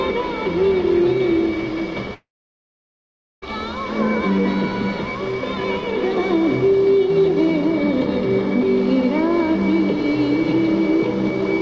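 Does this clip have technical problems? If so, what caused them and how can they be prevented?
Yes, there's a long network dropout from 2.14 to 3.44 s. The sound trails off as a brief fading buzz, then goes silent for about 1.2 s, and that stretch never comes back. Packet loss in transit is the likely cause. A steadier, preferably wired connection would prevent it.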